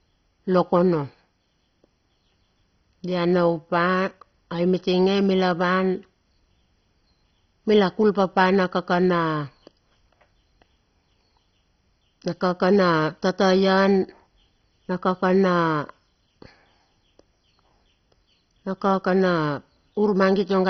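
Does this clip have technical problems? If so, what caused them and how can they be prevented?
Yes. All the way through, the speech sounds dull and gurgly, with nothing above 6.1 kHz and a grainy, watery texture on the remaining bands. That's likely MP2 compression starved of bits, which fits a very low rate of around 32 kbps. Layer II splits the signal into 32 sub-bands and shares bits between them; short of bits, it switches the upper bands off and quantises the rest coarsely. To prevent it, encode at a much higher bitrate or use a more efficient codec.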